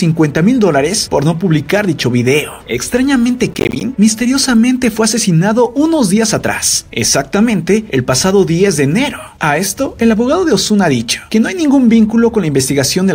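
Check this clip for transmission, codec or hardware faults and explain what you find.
One fault stands out: processor overload crackle from 3.52 to 3.81 s. The processor fell behind and missed about fifteen buffer deadlines, each buffer around 10 ms long. Each miss left a hard-edged silent gap, so the sound breaks into a brief, gritty crackling tear before clearing.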